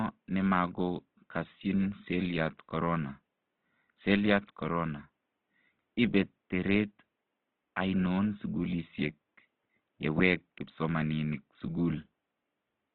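Throughout the speech, plainly audible Opus compression likely explains the grainy, rough texture. Bands stay filled with folded or noise-like energy rather than holes, consistent with CELT mode at roughly 16 kbps. The faint room noise sits about 55 dB below.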